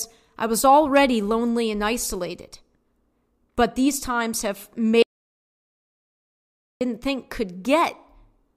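Speech recording with an audio dropout to silence from 5.03 s to 6.81 s: about 1.78 s of silence with no room tone, cutting the speech off mid-flow. The likely cause is lost input from a disconnected device, failed link or mute while recording continued.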